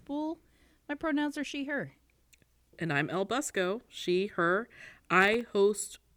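Processor overload crackle from 5.21 to 5.49 s in this speech, just after "she her": around ten sub-millisecond buffers miss their deadlines, each leaving a hard-edged silent gap, heard together as gritty crackle.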